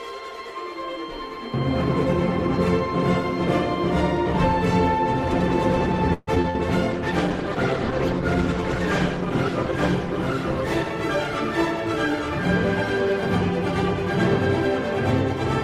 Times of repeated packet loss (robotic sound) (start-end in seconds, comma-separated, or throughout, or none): 6.13-6.56